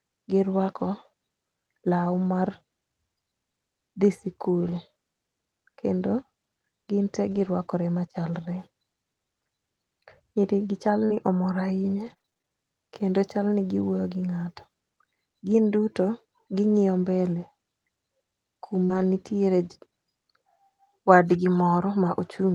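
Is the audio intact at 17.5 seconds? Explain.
Yes, the speech at 17.5 seconds is intact, with no dropout, glitch or other fault at that moment.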